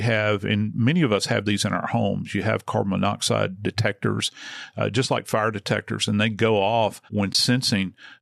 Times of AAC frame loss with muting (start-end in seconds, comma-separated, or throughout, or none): 7.33-7.35